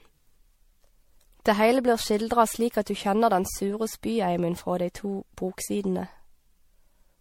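From start to end, the speech sounds swirly, smeared and hollow, with blurred attacks and nothing above 16.5 kHz. The likely cause is generation loss: repeated MP3 encoding, around seven passes, at a rate that fits 64 kbit/s, each requantising on a shifted frame grid.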